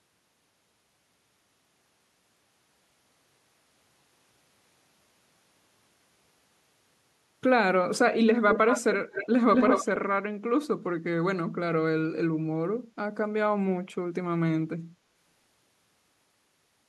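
Echo leak occurs three times, at 8.49 to 8.81 s, 9.11 to 9.28 s and 9.55 to 9.86 s. A delayed copy of the speech returns 219 ms late. It is slightly quieter, then fainter, then as loud as the speech. A speakerphone's echo canceller likely missed it.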